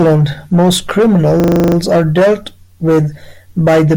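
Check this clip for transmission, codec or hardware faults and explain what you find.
One hardware fault is present: a system hang loop from 1.4 to 1.76 s, just before "are dealt with". The computer or audio driver stalled while the sound hardware kept replaying its ring buffer, so a single 40 ms slice of speech repeats exactly nine times at 25 Hz, which fits a buffer of about that length. It sounds like a rapid, rattling stutter. Unlike packet-loss concealment, which smooths or varies what it fills in, the repeats are identical and evenly spaced, and speech then resumes with essentially nothing lost.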